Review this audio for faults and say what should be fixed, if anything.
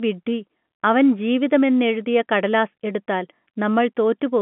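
Nothing in this audio needs to be fixed, since no faults turn up in it.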